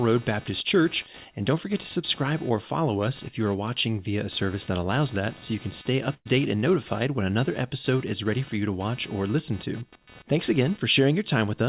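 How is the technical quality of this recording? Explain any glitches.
The recording has two faults: a buzzing interference that runs through the whole clip, and one short dropout in the middle. The speech is band-limited to 4 kHz, which fits a telephone-grade G.711 call path at 64 kbps.

Computer activity noise runs from start to end. Load changes in the computer's processor, graphics or mouse disturb the ground shared with the audio circuit. The audio then carries a buzz pulsing at around 300 Hz, roughly 25 dB below the speech. It rises and falls with the machine's activity rather than with the talking, which marks it as electrical interference and not acoustic noise.

A burst of packet loss occurs from 6.14 to 6.27 s. Consecutive packets arrived too late or not at all, so the receiver concealed the gap. It extended the last received sound for about 112 ms and faded it down, ending in about 50 ms of silence. 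Playback then picks up further along, so about 120 ms of speech is missing. This is heard as a brief held buzz or fading hiss followed by a small jump.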